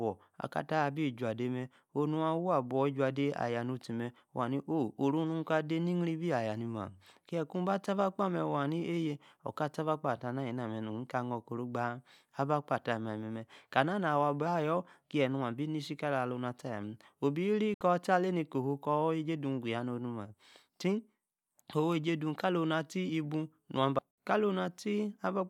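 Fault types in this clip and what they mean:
digital broadcast dropout: the receiver lost the signal or rejected corrupted frames and muted until clean data returned, so the speech drops into brief silence through a fast fade of about 3 ms. Each hole lasts about 64 ms, which fits two lost frames, once just before "taa alani kohuu kor" and once near the end. Unlike a network packet gap or a stutter, nothing is repeated or smeared: the sound simply vanishes and resumes further on, with that stretch gone.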